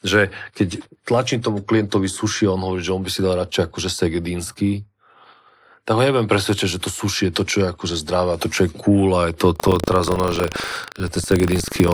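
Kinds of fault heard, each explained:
Buffer tearing: 9.52 s to the end, the ring buffer's writer and reader cross each period, splicing in a slice roughly 150 ms old, causing a 25 Hz rattle.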